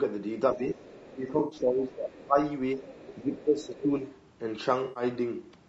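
Throughout, the speech sounds rough and grainy, with noise filling the gaps between harmonics. This is likely low-delay AAC compression (AAC-ELD) at a rate that points to about 32 kbps, and a spectrogram shows smeared harmonics and a hazy top band below the 8 kHz limit of the call path.

From 0.53 to 0.81 s the speech is suppressed in double talk, dipping by around 10 dB. The likely cause is an echo canceller ducking the talker while the far end was also active, which shows as a sagging waveform envelope.

From 0.69 to 1.14 s the other side's voice leaks through, faint at roughly 25 dB below the talker. The likely cause is echo the canceller missed, visible as a weak second set of harmonics.

From 1.14 to 2.37 s double-talk suppression returns more deeply, about 15 dB.

Inside that stretch, from 1.39 to 1.59 s, AAC frame loss with concealment replaces about 120 ms with a smeared, phasey fill. 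It appears as blurred, stretched spectral texture where harmonics should move.

The far-end voice leaks again from 2.76 to 3.18 s.

Double-talk suppression follows from 3.23 to 4.01 s, dipping about 10 dB, while faint leakage scraps appear at 3.37 to 3.43 s and 3.65 to 3.83 s.

A second 120 ms concealed frame loss from 4.83 to 5.03 s gives the same blurred, noisy patch.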